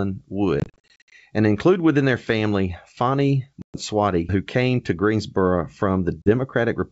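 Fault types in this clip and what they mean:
Packet loss on an ADPCM call: lost packets were replaced by silence and the decoder's predictor fell out of step, leaving hard-edged gaps, heaviest from 0.6 to 1.1 s.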